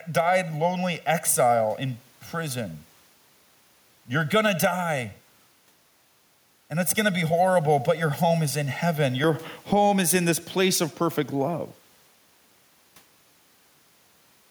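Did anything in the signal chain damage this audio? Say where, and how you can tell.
Yes. Gain pumping runs through the whole clip and points to the call-processing stage. The level breathes by around 10 dB. The room noise sits about 40 dB below the speech, and loud and quiet passages end up squashed together. The likely cause is input gain set far too high, with a fast limiter or compressor clamping down on every loud syllable.

Channel delay (comb filtering) affects the first 9.24 seconds, from 0.0 s onward. The speech sounds hollow and phasey, with fixed notches starting roughly near 300 Hz and repeating at even spacing up the spectrum. That pattern fits one channel arriving around 1.5 ms late before the two are summed to mono, which suggests a buffer misalignment in the driver stage. The shared content cancels at those frequencies, and the colouration disappears after 9.24 s.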